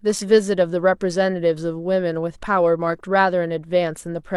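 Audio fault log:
2.42–2.47 s, damaged data in a compressed stream: a brief glitch of about 50 ms breaks into the speech. Corrupted bytes in the encoded stream at this point caused the decoder to misinterpret or reject the affected frames, lose its place, and hunt for the next valid frame header before normal decoding resumed.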